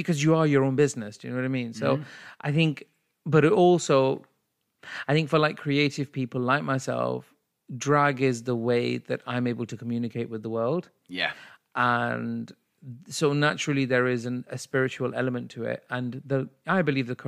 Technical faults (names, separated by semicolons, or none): none